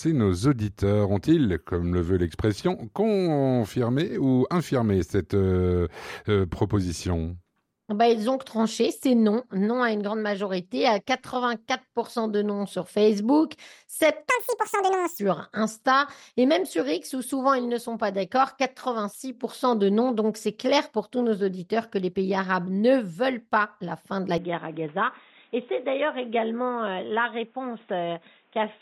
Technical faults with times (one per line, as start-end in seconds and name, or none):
14.29-15.19 section at the wrong speed
24.38-28.82 input switched to a poorer device